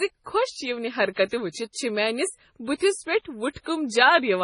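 From start to finish the speech has a watery, swirling texture: sibilants break into metallic chirps, consonant onsets smear, and nothing sounds above about 10.5 kHz. This is heavy damage from MP3 compression, likely at a starved bitrate that fits roughly 24 kbps. Short of bits, the encoder cut the treble at a fixed point and dropped weaker frequency lines, which flicker in and out from frame to frame and cause the swirl.

At 1.11 s, just after "خۄش یونہِ", a hiss runs for about 58 ms until 1.17 s, and the attack that follows lands soft and blurred. This is pre-echo. The onset fell late in a transform block, so coding noise sized for the loud attack spread back across the quiet stretch before it, where nothing masks it.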